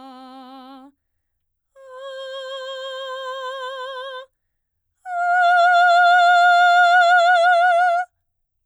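Nothing in the music points to a technical fault at any moment. There is no event here that needs a time mark or a closer listen.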